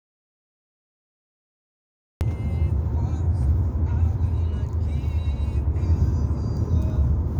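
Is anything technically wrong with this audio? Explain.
Yes. There's an audio dropout to silence right at the top: the clip opens already in dead silence, with no room tone at all, and the sound only cuts in at 2.21 s, mid-flow rather than with a natural onset. That points to the input likely having been lost for a moment, say a loose connection, a dropped link or an accidental mute, while the recorder kept writing silence. Whatever happened before 2.21 s is simply gone.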